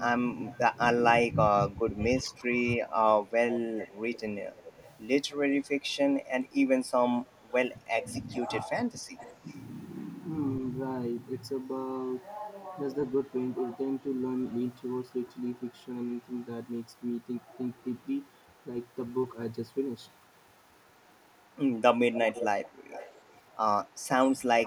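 Speech, with two recurring faults. The first is echo leak. A faint copy of the voice trails it by 230 ms. It is heard from 0.0 to 0.6 s, at about 20 dB below the speech, and again from 1.94 to 2.26 s, at about 30 dB below. From 3.22 s it stays until the end, at about 25 dB below. The likely cause is a loudspeaker whose sound reached the far microphone and slipped past its echo canceller. The second fault is speech suppressed in double talk. The voice dips in pieces between 0.36 and 3.33 s, for roughly a second and a half in total, dropping as much as about 20 dB. It dips again between 7.24 and 9.44 s, for around a second, by a similar depth. At 23.83 s there is a brief dip of about 10 dB. The likely cause is an echo canceller that could not tell the talker from the echo while both sides spoke, and so turned both down.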